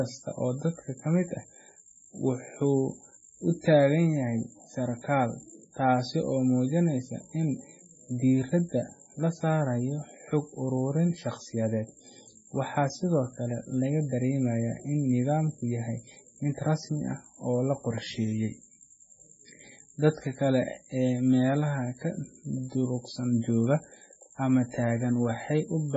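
MP3 compression damage runs through the whole speech clip. Nothing is present above 7.7 kHz, and the heavy watery swirl and chirpy s sounds point to a very low bitrate, around 16 kbps, likely from an encoder zeroing weak frequency lines frame by frame.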